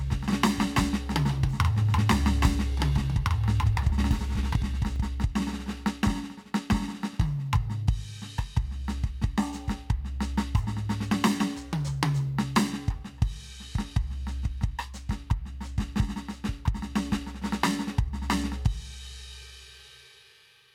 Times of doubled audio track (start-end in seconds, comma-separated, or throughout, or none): 0.00-4.96